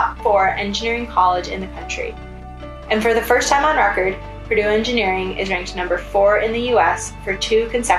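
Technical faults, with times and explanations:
No technical faults can be heard; the signal stays continuous and intact from its first moment to its last.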